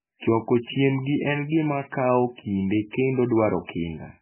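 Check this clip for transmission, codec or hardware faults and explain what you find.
One fault runs through the whole clip, and heavy MP3 compression is the likely cause. Starved of bits, the encoder removes everything above 3.1 kHz and flickers weak frequency lines between frames. The speech therefore sounds dull, watery and swirling, which fits a bitrate near 8 kbps.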